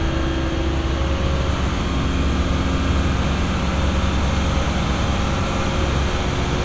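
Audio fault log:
Nothing stood out on listening to this audio.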